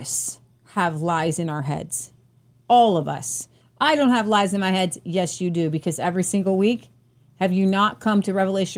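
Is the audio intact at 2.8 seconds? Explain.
Yes, the speech at 2.8 seconds is intact, with no audible fault at that moment.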